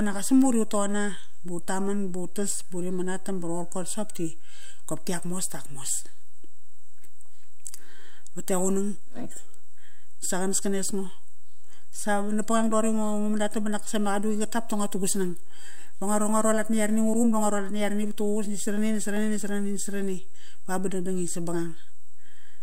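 Throughout the speech a DC offset of about -23 dBFS holds the waveform off centre, inaudible itself, unlike low-frequency hum, which rises and falls as a tone rather than sitting as a fixed shift.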